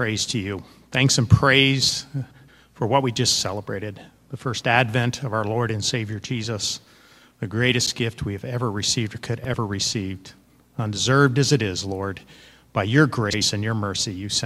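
At 2.31–2.49 s, 7.85–7.96 s, 9.43–9.55 s and 13.29–13.42 s, frames out of order swap two adjacent blocks of about 85.3 ms each, consistent with four-frame runs. Each spot flutters, but unlike a dropout or repeat, no time is lost or duplicated.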